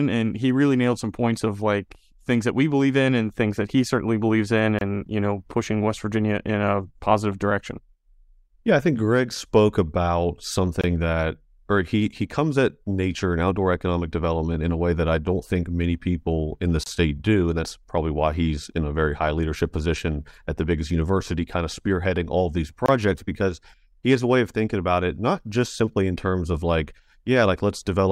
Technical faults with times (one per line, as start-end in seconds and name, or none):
4.79-4.81 gap at a join of encoded pieces
10.81-10.84 gap at a join of encoded pieces
16.84-16.86 gap at a join of encoded pieces
22.86-22.88 gap at a join of encoded pieces